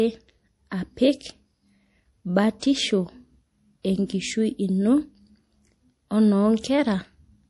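A speech clip carrying plainly audible MP3 compression throughout, likely from a low bitrate near 48 kbps: watery, swirly sibilants, smeared attacks, and on a spectrogram a hard ceiling at 11.5 kHz with flickering, patchy high-frequency blocks.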